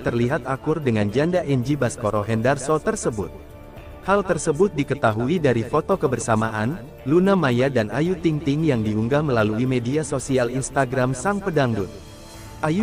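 No technical faults can be heard anywhere in the clip. Nothing in the sound calls for comment at any point.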